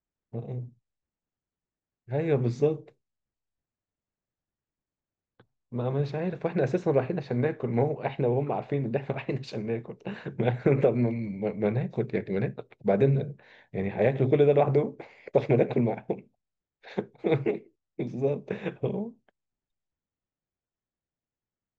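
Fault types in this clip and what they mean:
Listening through the speech, nothing stood out as a fault.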